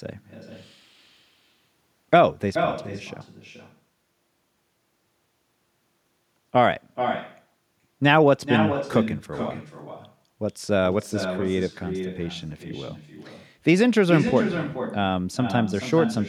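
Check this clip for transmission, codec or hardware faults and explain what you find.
Echo with no canceller runs through the whole clip. The far end's loudspeaker feeds this speech back into its microphone, and nothing subtracts it, so each phrase returns around 400 ms later, about 8 dB quieter, sounding thinner.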